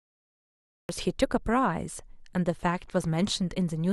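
From 0.0 to 0.89 s there is only digital silence. Then the speech appears abruptly, already under way. This is a cut-off start. Capture began late, so the opening of the sound was lost. At 0.89 s it has no natural attack or fade-in.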